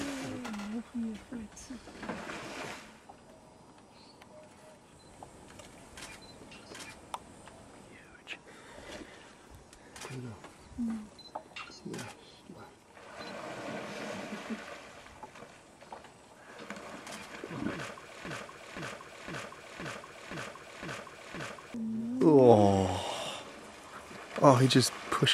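At 18.25 s the audio catches in a broken-record loop: a half-second fragment, about 0.52 s long, plays back to back seven times until 21.74 s. Whatever should have played there is gone, most likely because the player or stream stalled and kept resending its last chunk.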